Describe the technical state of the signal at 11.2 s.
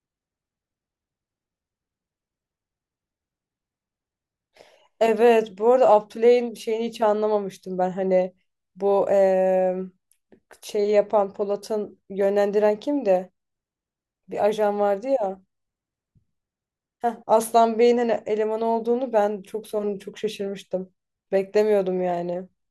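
At 11.2 s the speech signal is intact, with no audible technical fault at that moment.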